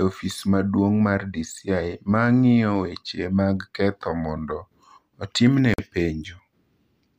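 From 4.20 to 5.03 s, just after "ng’iyo weche mag ketho", the speech slows by 5.75% and drops about a semitone (103 cents), then snaps back. This is likely a drift correction step in clock-matching playback. At 5.74 s a hard-edged 47 ms hole of silence is a gap between stream segments, where mismatched time stamps between segments leave a space the player fills with silence.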